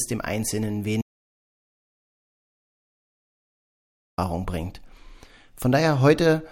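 A speech clip with an audio dropout to silence from about 1.02 s to 4.18 s: the sound cuts off abruptly, leaving roughly 3.16 s of dead silence with no room tone, then snaps back mid-flow. That's likely the input dropping out while recording carried on.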